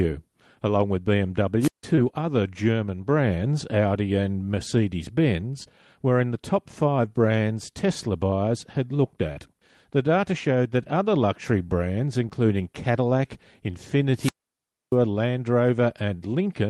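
At 1.60 to 1.83 s there is a wireless microphone squelch dropout. The radio signal fades, hiss swells, and the receiver then mutes the output for 157 ms before the speech returns. The rising static ahead of a genuinely near-silent hole is what distinguishes it from a network dropout.

Short concealed packet loss follows at 1.95 to 1.99 s, at 5.63 to 5.67 s just before "were in the top", and at 12.29 to 12.33 s right after "that other luxury brands". Each loses 20 ms, which fits a single 20 ms Opus frame on the call path. The decoder fills the hole by extending the preceding sound, so it comes through as a quick smear or wobble with no silence.

A second squelch dropout, far longer, runs from 14.14 to 14.95 s and mutes the output for 636 ms.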